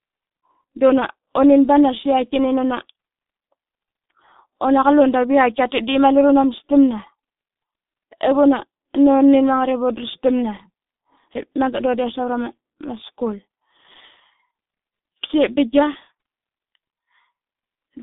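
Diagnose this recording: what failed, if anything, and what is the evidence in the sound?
G.723.1 codec damage runs throughout the speech at the codec stage. Nothing reaches above about 3.7 kHz or below 150 Hz. Consonants smear and voicing turns hoarse because the coarse voice model updates only every 30 ms frame, which fits a bitrate near 6 kbit/s.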